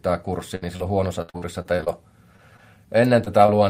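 The clip opens with a burst of packet loss at 0.55 to 0.66 s. About 60 ms of audio never arrived, so the receiver stretched the last bit of sound for roughly 63 ms, fading it down. When playback resumes it has skipped ahead, with about 11 ms simply gone. From 1.22 to 1.88 s there's repeated packet loss that gives a robotic sound. Seven separate gaps, the longest 64 ms, are each patched by extending the preceding sound. About a third of that stretch is filler and around 220 ms of the real audio is missing, which gives it that choppy quality. Scattered around these are short concealed packet losses at 0.77, 2.36, 2.57, 3.24 and 3.46 s. The first is about 40 ms of missing audio and the rest about 20 ms each, all bridged by continuing the last sound and blending back in. They come across as quick smears or wobbles rather than obvious dropouts.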